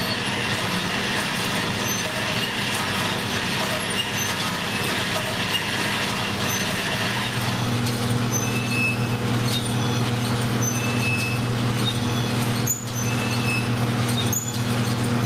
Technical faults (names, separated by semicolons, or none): gain pumping